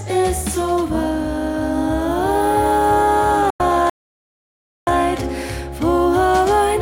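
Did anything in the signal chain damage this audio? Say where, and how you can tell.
Yes. A digital broadcast dropout at the reception and decoding stage cuts the sound from 3.50 to 3.60 s with a roughly 3 ms fade. The 96 ms gap fits about three frames failing their checksum, so the receiver muted and that material is gone.

A playback stall follows at the playback stage: the output goes silent mid-flow from 3.90 to 4.87 s, a gap of about 0.97 s. The likely cause is the player running out of buffered data or its output thread being blocked until it recovered.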